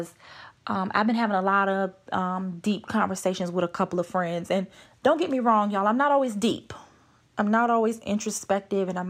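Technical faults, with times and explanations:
No technical faults can be heard in this speech recording. Nothing in the audio calls for a time or an explanation.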